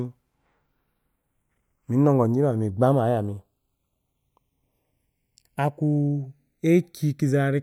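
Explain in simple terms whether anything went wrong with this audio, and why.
The speech suffers from channels drifting apart. The two sides run on slightly mismatched clocks, so one falls about half a millisecond behind, causing slow flanging throughout.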